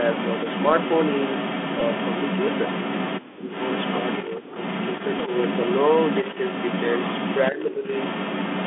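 The Bluetooth CVSD headset codec colours the whole speech clip. The band sits roughly between 250 Hz and 3.5 kHz, so the top end is gone. The codec's one-bit delta steps at 64 kHz can't keep up with sharp, bright sounds, so s sounds come out scratchy and loud high peaks crunch. A grainy hiss rides under the voice the entire time, and the damage is plainly audible, not subtle.

Right from the start until about 3.21 s there's an echo leak. A second copy of the voice trails the original by about 447 ms, at a level roughly 5 dB above the speech, so it's hard to miss. The likely cause is a far-end loudspeaker whose echo canceller let part of the pickup slip back down the line.

At 1.8 s there's a Bluetooth headset packet repeated event: about 11.2 ms of audio replaced by re-decoded old bits, which points to three lost packets back to back. You hear it as a tiny buzzy blip. A second one at 5.19 s covers about 3.8 ms, consistent with a single packet, and is just a small tick.

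From 3.2 to 3.46 s the speech suppressed in double talk problem shows up. The voice drops hard, about 40 dB at the deepest, for roughly a fifth of a second. It's likely the echo canceller ducking everything while both ends overlapped. The echo leak returns at 3.48 s and runs to the end, now delayed about 455 ms and again roughly 5 dB above the speech. Two milder dips of about 15 dB follow, from 4.28 to 4.49 s and from 7.51 to 7.85 s.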